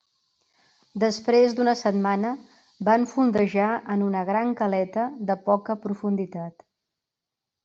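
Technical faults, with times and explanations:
Nothing technical jumps out here; this bit of speech runs along without a single glitch worth pointing to.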